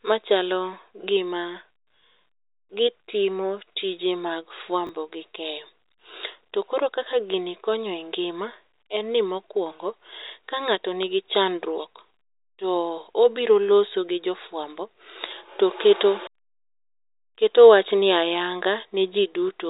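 A speech clip carried over G.711 A-law telephone coding, whose spectrogram stops at about 3.8 kHz. Between 4.87 and 4.89 s, after "gitimo tije mag" and before "gi keyo", there are chunks out of order: a 10 ms chunk plays one chunk late. The moment sounds briefly jumbled, with three hard joins where the order breaks.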